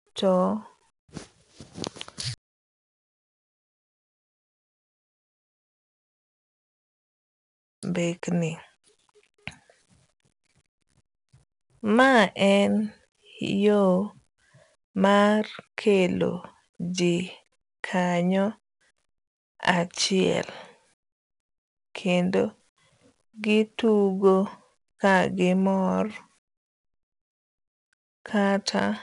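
From start to finish the speech carries a gritty hiss that rises and falls with its level, roughening sharp attacks, and nothing is present above 10.6 kHz. This is 4-bit ADPCM compression, near 89 kbps, whose coarse adaptive steps cannot track the waveform closely.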